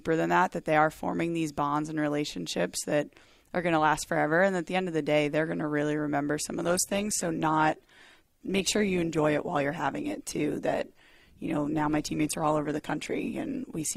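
Adaptive stream at a lower bitrate from 6.62 s, after "to really remember some", onward: a slowed connection brought a leaner encode, so codec artefacts abruptly rise, without any gap.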